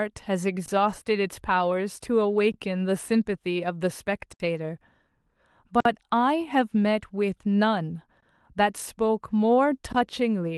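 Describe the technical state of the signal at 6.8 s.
At 6.8 s the speech signal is intact, with no audible fault at that moment.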